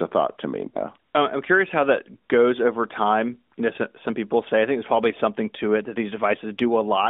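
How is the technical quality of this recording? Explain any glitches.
One dropout interrupts this narrowband mobile call recording, which is band-limited to roughly 200 Hz to 3.6 kHz by the AMR narrowband mobile codec at 12.2 kbps, with light codec damage.

Lost AMR speech frames, 0.68 to 0.77 s, just after "a thought to me": radio errors corrupted a short run of frames, which fits three 20 ms frames (60 ms) being discarded. The decoder bridged the gap by repeating the last good pitch and vocal tract settings at falling gain, so the sound smears, stretches and fades before the voice returns weak or rough.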